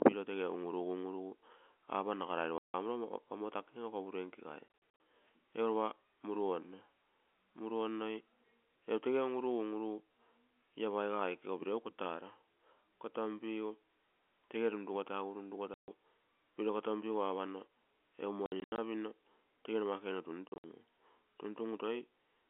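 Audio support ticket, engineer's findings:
Packet loss filled with silence: hard-edged dropouts at 2.58–2.74, 4.68–5.0, 15.74–15.88, 18.46–18.78 s (before "pinno tege numa kuge") and 20.48–20.64 s (after it). The gaps step in 20 ms units, which fits 20 ms packets. The receiver is inserting silence instead of concealment.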